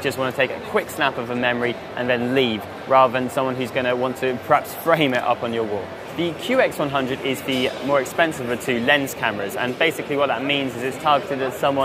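No technical faults can be heard anywhere in the clip, and the signal stays intact and undisturbed throughout.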